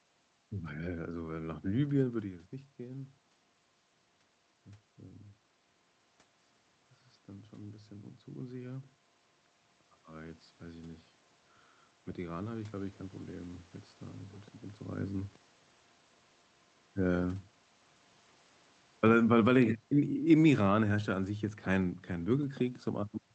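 Speech, carried over a call path whose coding limits the top end to around 8 kHz. From 18.88 to 22.52 s the automatic gain falls: the gain control, judging the input too loud or its background noise too strong, steadily pulls its gain down by about 6 dB, so the voice and the room noise behind it sink together over those 3.6 seconds.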